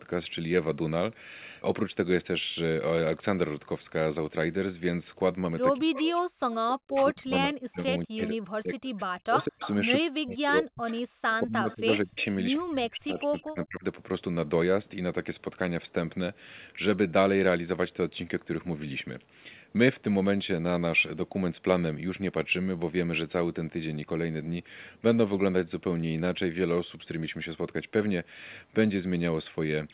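From 5.8 to 13.84 s the speech repeatedly dips, thins and drops out in pieces, adding up to roughly five seconds of lost or weakened sound, with the deepest drops reaching about 40 dB down. This is speech suppressed in double talk: while both ends were talking at once, the echo canceller likely could not tell the near talker from its own loudspeaker echo and pulled the whole signal down.

Within that stretch, a delayed copy of the speech surfaces at 5.97–6.54 s, 9.41–9.73 s, 10.89–10.97 s, 11.7–12.25 s and 13.36–13.66 s, trailing the original by 198 ms. It is loudest around 9.4 s, about 10 dB under the speech, and quieter elsewhere, down to roughly 20 dB below. This is echo leak: the far end's loudspeaker sound likely reached its microphone and was only partly cancelled, so scraps were sent back. Throughout the clip the narrow band, with nothing above 4 kHz, fits a G.711 call path.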